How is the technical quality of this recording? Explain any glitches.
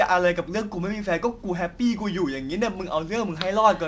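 The technical quality of this recording holds up, with no glitches to explain.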